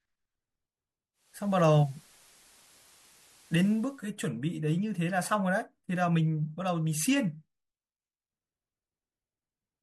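At 1.13 s the speech blends from digital radio to the analogue FM broadcast. The receiver lost the digital stream and cross-faded over about 0.42 s. The level shifts by about 4 dB. Hiss rises to roughly 30 dB below the signal. The digital sound returns at 4.14 s.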